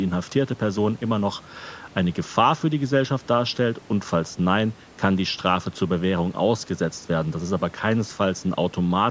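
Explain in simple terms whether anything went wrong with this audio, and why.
No, nothing went wrong with this speech recording. It went through a call's microphone processing, which trims away the deepest bass and carries nothing above 8 kHz, and that is simply how that kind of path normally sounds.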